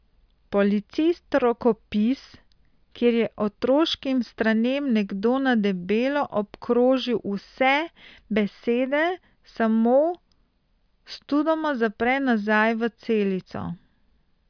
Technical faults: none

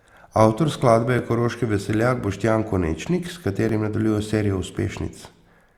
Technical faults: overlapping chunks

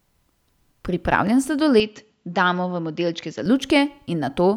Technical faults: input switched to a poorer device

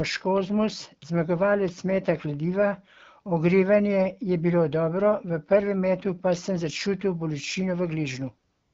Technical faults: AMR comfort noise

